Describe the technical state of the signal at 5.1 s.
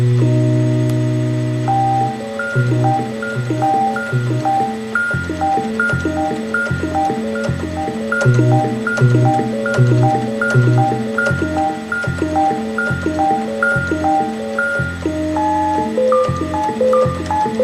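At 5.1 s the signal is intact, with no dropout, clipping, distortion or other technical fault audible.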